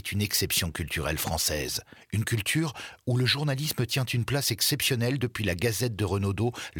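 No technical faults can be heard anywhere in this recording.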